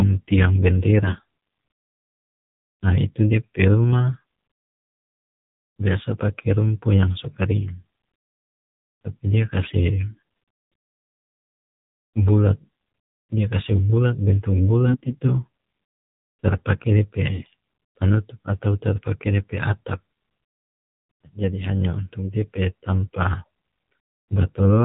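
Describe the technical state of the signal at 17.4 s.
AMR bit errors, 17.28 to 17.47 s, just before "panutup atau tara": flipped low-priority bits misplace the excitation pulses and skew fine gain and spectrum values, so the speech turns hoarse, scratchy and gargly. Underneath runs the AMR narrowband mobile codec, cutting everything above 4 kHz and sounding buzzy and synthetic, which fits a 7.4 kbps mode.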